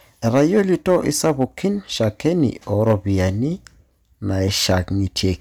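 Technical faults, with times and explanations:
0.27–1.44 s and 2.73–2.94 s, hard clipping: speech peaks overdriven by about 5 dB, then about 4 dB, are sliced flat, giving crackle on the peaks rather than the rounder, smoother grit of soft saturation.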